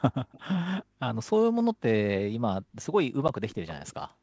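Echo leak at 0.25 to 0.49 s and again at 3.49 to 3.94 s: a faint copy of the speech, well below the direct sound, trails it by about 360 ms. This is likely a loudspeaker on the far end whose echo canceller let residual pickup travel back down the line.

Packet loss on an ADPCM call at 3.28 s: a hard-edged gap of about 10 ms, roughly one packet, drops out as silence. The decoder's adaptive step size and predictor lose track of the sender's, so the speech resumes slightly distorted before settling.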